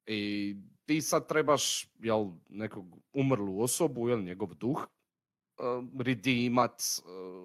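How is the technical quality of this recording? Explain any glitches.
The recording has two glitches, both compressed frames skipped, at 4.84 s and 6.61 s. Whole frames never reached the output, so the speech jumps ahead. About a tenth of a second is lost at 4.84 s and a few hundredths at 6.61 s.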